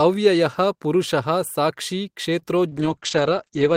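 At 2.39 to 2.43 s there is a short stall from a late packet. The jitter buffer ran dry, so the receiver held the last sound for about 18 ms and then resumed where it left off. Nothing is lost, which separates it from packet loss. It is heard as a brief hold with a faint buzz or dip.

From 2.69 to 2.73 s comes a short concealed packet loss. About 20 ms of audio never arrived, and the decoder filled the gap with roughly 19 ms extrapolated from the preceding sound. The real content is gone, so this is a small smear or wobble rather than a held sound.

A call bitrate drop begins at 2.72 s and lasts to the end, with the encoder falling from 32 to 10 kbps. Audio bandwidth shrinks from 20 kHz to 8 kHz, so the sound turns muffled and watery. It is a sustained change in tone, not a momentary glitch like the two before it.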